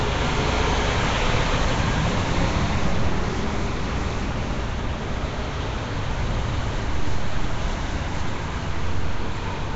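Throughout, a rough, hissy, smeared haze points to likely Nellymoser compression near 32 kbps; the spectrogram shows noise-filled bands and nothing above 7.7 kHz.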